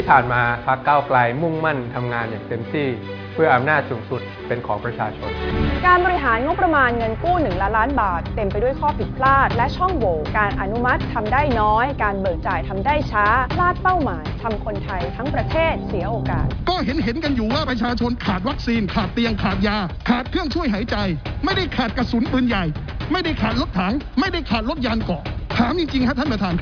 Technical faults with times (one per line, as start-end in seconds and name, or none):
none